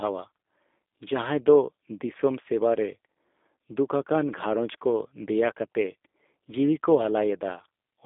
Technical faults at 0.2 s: G.729 codec

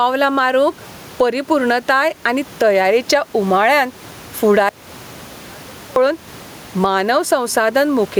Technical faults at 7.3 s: gain pumping

